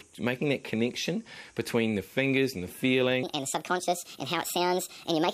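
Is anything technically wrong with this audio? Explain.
Yes. From 3.23 s to the end at 5.34 s there's a section at the wrong speed: it runs about 1.47 times too fast, likely from being played or resampled against the wrong clock. Pitch and tempo jump together, about seven semitones up, so everything suddenly sounds higher and hurried.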